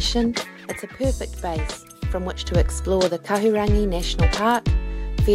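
At 0.80 s a sudden gain jump drops everything, background included, by about 6 dB, likely an unramped gain change; the waveform steps down abruptly, recovering at 2.47 s.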